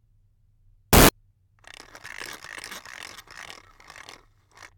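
From 0.93 to 1.09 s, samples are built from the wrong bytes. Misassembled bytes turn fine low bits into large values. The result is a burst of loud, harsh broadband noise.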